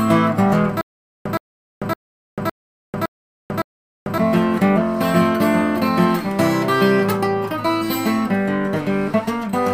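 A stream stall likely caused stutter with silent gaps, 0.81–4.18 s: a 119 ms burst repeats six times, every 561 ms, between digital silence.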